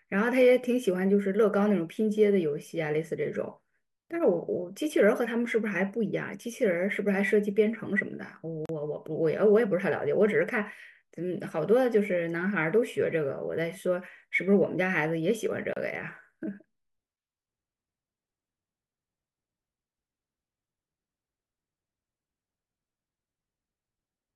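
Two short dropouts break the speech, at 8.66 s and 15.73 s, lasting about 37 ms and 31 ms. Each is a gap at a join of encoded pieces. Separately encoded segments were stitched together with their encoder start delay and last-frame padding left in, so you get brief silences with slightly smeared edges before the speech picks up where it stopped.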